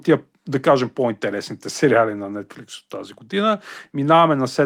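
Speech recording with no technical faults heard anywhere in it.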